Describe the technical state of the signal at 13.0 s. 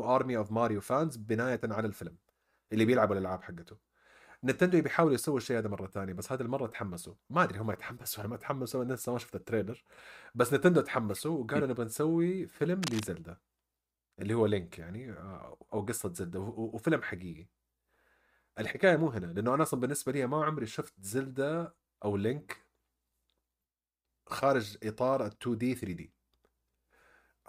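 At 13.0 s the speech is overlaid by cable scratch noise, running from 12.82 to 13.04 s. It is a dense, irregular burst of scratching and rustling, sitting roughly 10 dB below the speech, that rides over the sound for about a fifth of a second. The likely cause is a worn cable, connector or control being moved, so that its contact resistance fluctuates rapidly and injects uneven noise bursts into the signal.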